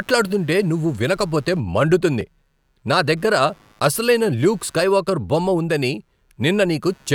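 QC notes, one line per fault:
throughout computer activity noise: faint buzz pulsing around 100 Hz, roughly 40 dB below the speech, from computer load disturbing the audio ground; regular vertical striations persist through pauses on the spectrogram.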